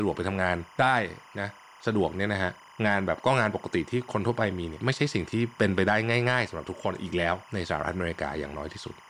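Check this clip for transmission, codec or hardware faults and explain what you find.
One fault runs through the whole recording: timecode bleed. Linear timecode from a neighbouring track or cable has leaked into the speech path, adding a square-wave signal that flips between pitches around 1 and 2 kHz at roughly 25 frames per second, about 25 dB below the speech. It sounds like a constant chirping warble behind the talker. Unlike a steady whistle or mains hum, it has a busy, data-like rhythm tied to the 25 fps frame rate.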